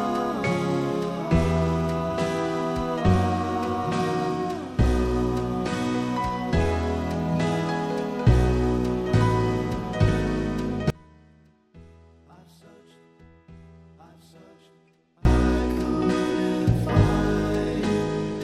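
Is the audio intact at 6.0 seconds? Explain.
Yes, the audio is intact at 6.0 seconds, with no dropout, click, distortion or other fault at that point.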